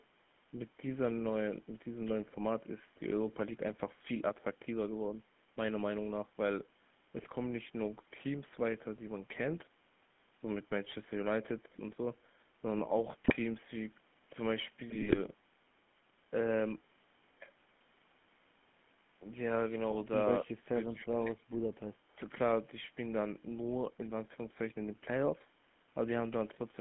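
The whole 27-second speech clip carries the sound of the GSM full-rate codec. The band runs from about 150 Hz to 3.4 kHz. The codec rebuilds the voice from a vocal-tract model fed by sparse, regular pulses. That leaves a clear buzzy, gravelly roughness. The coarse texture fits a 13 kbps full-rate link. The lowest bass is also trimmed, as call microphone processing normally does.

GSM bit errors come next, at 7.18 to 7.26 s, 13.24 to 13.36 s, 14.90 to 15.19 s and 19.91 to 19.99 s. Corrupted bits reached the decoder. Wrong filter, pitch or gain values twisted the spectrum or spiked the level for short frames. Each burst sounds like a squawk, pop or gargle. The error rate points to roughly 2 percent of bits flipped. The third burst is the longest.

Then the voice itself drops. At 20.44 to 20.48 s it dips by about 15 dB. From 20.94 to 21.55 s it falls away harder, by about 30 dB, for around half a second. 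The likely cause is speech suppressed in double talk. With both sides talking, the echo canceller could not tell the talker from the far-end echo. It turned the talker down too.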